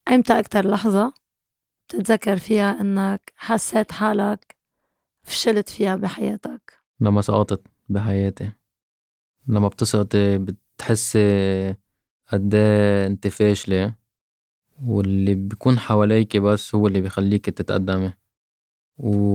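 Nothing stood out as a fault on listening to this speech recording.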